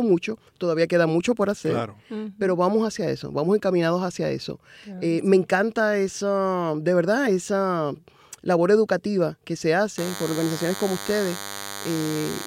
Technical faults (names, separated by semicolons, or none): DECT cordless phone buzz